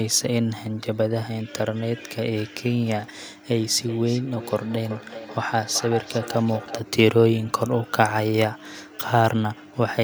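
From 3.52 to 6.84 s the speech comes back as a thin, ringing repeat about four-tenths of a second behind itself, peaking about 12 dB below the speech. This is feedback echo between two devices: one device's microphone recaptures the other's playback, which neither echo canceller removes.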